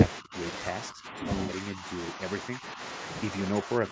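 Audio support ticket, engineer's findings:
Rough, grainy sound across the whole clip, with noise filling the gaps between harmonics. Likely low-delay AAC compression, AAC-ELD at 32 kbps. Short frames resolve pitch poorly and the low bitrate starves the bits, so the damage is plainly audible. Band stops at 8 kHz.

Level dips at 0.20–0.34 s, 0.89–1.24 s, 1.69–1.85 s, 2.50–2.80 s and 3.63 s to end. The deepest are near 20 dB early on and only a few dB at 1.7 s. Likely speech suppressed in double talk: the echo canceller could not split the talker from the far-end echo, so it turned both down.

Smeared, noisy patch at 1.43–1.52 s, with 60 ms lost, which fits two lost frames. This is AAC frame loss with concealment. The decoder rebuilt the gap from the last good spectrum, so the content blurs instead of dropping out.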